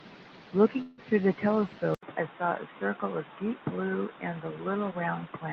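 From 0.81 to 1.00 s there is a call audio freeze, likely caused by packets arriving late and draining the jitter buffer. With nothing new to play, the receiver stretched the last sound into a fading buzz or hiss for about 165 ms. When the packets arrived, the speech resumed exactly where it had stopped. Nothing is lost, but the rest of the speech now runs about 165 ms behind.

At 1.95 s the input switched to a poorer device, likely a different microphone or a headset call profile. The change brings a short break of about 80 ms. After it, the speech has nothing above 3.8 kHz, so it sounds duller and boxier. It is also roughly 5 dB quieter and carries a faint new background noise well below the speech. This narrower, quieter sound continues to the end.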